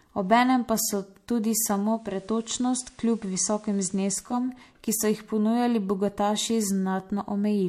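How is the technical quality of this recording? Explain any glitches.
The recording is clean speech apart from one digital radio blend to analogue. From 1.79 to 4.52 s the receiver fades over about 0.42 s to its FM signal. The level drops about 1 dB, and a faint hiss sits around 35 dB down. A spectrogram shows a grainy noise floor.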